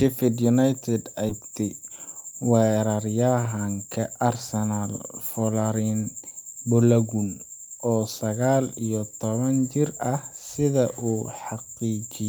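Speech clip, and at 1.3 s there's a skip ahead: about a second of audio just vanishes and the two sides are butted together with no real gap. That's the jitter buffer, or the network, dropping a chunk while later audio was already queued. Right after, from 1.39 to 3.18 s, you get a jitter buffer speed-up. The receiver was still carrying extra delay and trimmed tiny pitch-period slices, around a fifth of a second in total, so the speech runs about 113% fast at unchanged pitch and sounds a bit rushed.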